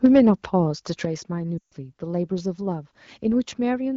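From 0.04 to 0.29 s the loudest peaks have a harsh, crackling edge with flattened tops. This is microphone overload. The input level sits about 4 dB beyond what the converter can represent, so a few percent of the samples in that stretch are squared off at the converter's limit. The likely cause is a microphone gain set too high, which drives the waveform into the converter's limit.

At 0.06 s, inside that distorted passage, both the voice and the background drop abruptly by about 4 dB. At 1.05 s a second, larger drop of about 7 dB follows. These are microphone volume stepped down events. Each change lands in one step rather than as a smooth fade. The likely explanation is the call software's automatic gain control reacting to the clipping and cutting the device's input volume.

From 1.58 to 1.73 s, about 140 ms, the sound drops to near silence within two frames before the voice comes back weak or rough for a moment. 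This is lost AMR speech frames. The gap fits a run of roughly seven consecutive 20 ms frames that failed to decode. During the gap the decoder repeats its last good pitch and spectral parameters while lowering the gain. Outside the gap the AMR wideband codec carries the audio at 12.65 kbit/s, with full HD Voice bandwidth.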